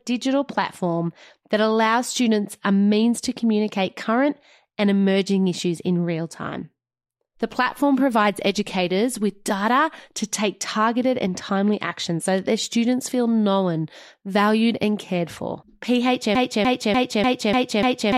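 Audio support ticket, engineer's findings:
Broken-record loop, 16.35 s to end of clip. Playback or stream path likely stalled and kept re-sending its last held fragment. Symptom: a single 0.30 s slice of speech repeated back to back six times, identical each pass. Audio due in that span is lost, and normal playback never resumes.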